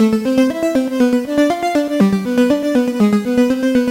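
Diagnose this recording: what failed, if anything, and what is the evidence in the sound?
Nothing failed in this recording, and nothing in the sound points to a fault at any stage.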